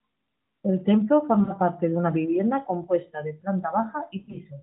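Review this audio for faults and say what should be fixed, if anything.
Lost AMR speech frames occur twice. At 1.44 to 1.54 s, just before "parte de una vivienda", about 40 ms drops out, which fits two missing 20 ms frames. The decoder reuses the last good pitch and vocal tract settings with falling gain. That gives a brief dip and warble. At 4.18 to 4.38 s, 100 ms is lost, scattered over 160 ms. The longest run is 40 ms. The result is a series of brief dips with weak recovery. To prevent it, strengthen error protection on the radio link or add frame redundancy.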